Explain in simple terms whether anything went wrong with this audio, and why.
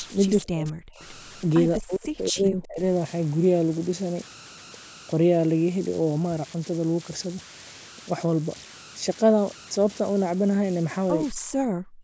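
Throughout the speech there is a steady whistle near 1.5 kHz, with a grainy hiss under the quieter moments. These are converter idle tones. The converter that turned the sound into digital form had no added dither, so small signals fell into repeating patterns that produce a tone.

Near the start, short ghostly copies of the speech arrive about 0.22 seconds after the original, at 0.00 to 0.06 s, 0.37 to 0.42 s and 0.98 to 1.04 s, each fainter than the one before. This is an echo leak, likely from a far-end loudspeaker whose echo canceller let scraps of the sound slip back into the call.

The speech also dips sharply or nearly vanishes from 0.44 to 0.80 s, from 1.78 to 2.80 s, and from 11.52 s to the end. This is speech suppressed in double talk. The likely cause is both people talking at once, which confused the echo canceller so that it turned this talker down along with the echo.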